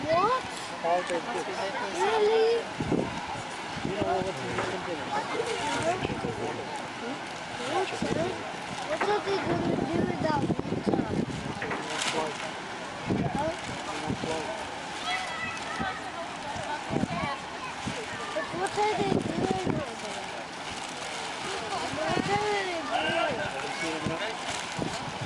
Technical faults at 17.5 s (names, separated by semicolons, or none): none